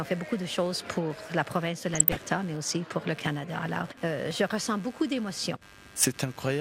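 Load changes in the computer are moving the ground shared with the audio circuit, so computer activity noise runs through the whole recording. It comes through as a buzzy, scratchy pulsing, around 100 times a second, sitting roughly 25 dB below the wanted sound. Its rough texture rises and falls with what the machine is doing rather than with the audio itself, which gives it away as interference from the computer and not part of the recording.

From 1.93 to 2.22 s, weak DAB reception lets bit errors slip past the error correction into the MP2 audio data, producing DAB burbling. Corrupted samples put short blips of noise in single sub-bands, and corrupted scale factors make sub-bands jump in level for up to a frame. Across this short stretch, which fits about a dozen damaged frames at a bit error rate of roughly 0.3%, the sound takes on a burbling quality.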